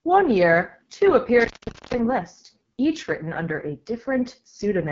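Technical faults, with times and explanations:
Throughout: AMR wideband (HD Voice) codec. The speech has a rough, raspy grain, and nothing sits above about 7.2 kHz. That pattern fits AMR-WB running at its lowest mode, around 6.6 kbit/s. At that rate the pulse-driven vocal tract model can't hold detail, and the top band is just shaped noise.
1.40 to 1.98 s: intermittent contact. Right after "year two" the line crackles and drops out for about 440 ms, leaving only faint hiss before the sound returns with another crackle ahead of "list each written under." It sounds like a loose plug or cable momentarily opening.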